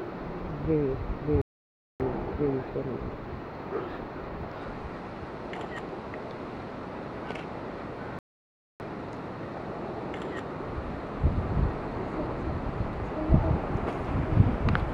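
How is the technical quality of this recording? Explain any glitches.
The recording is marred by two playback stalls. At 1.42 s the sound cuts off mid-flow and stays silent for about 0.58 s, resuming at 2.00 s; at 8.19 s it drops out again for about 0.61 s, returning at 8.80 s. Each gap is an abrupt hole rather than a fade. The likely cause is the player running out of buffered data or having its playback thread blocked, so output went quiet until it caught up.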